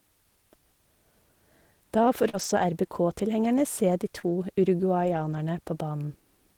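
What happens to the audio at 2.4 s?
Short concealed packet loss hits at 2.29 to 2.35 s. About 40 ms never arrived, so the decoder extended the preceding sound, leaving a brief smear. Overlapping its end, from 2.33 to 2.63 s, comes a lost packet rebuilt from error correction. Low-bitrate backup copies fill about 160 ms, so there's no gap, but that stretch sounds rougher and noisier.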